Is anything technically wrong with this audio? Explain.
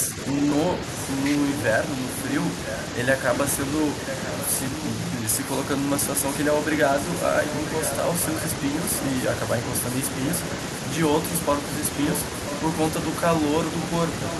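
Yes. Echo leak appears at 4.07–4.44 s, 7.0–8.42 s and 13.81–14.39 s: a faint copy of the speech returns about 0.99 s late, roughly 10 to 15 dB down, likely from an incomplete echo canceller. Unlike room reverb, it is a distinct, delayed repeat.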